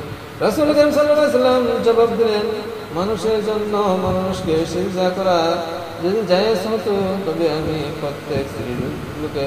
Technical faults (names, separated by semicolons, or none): GSM phone buzz